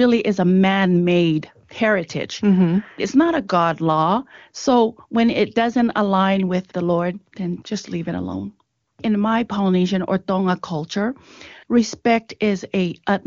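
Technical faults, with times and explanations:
Nothing stood out on listening through this speech clip carried over the AMR wideband (HD Voice) path.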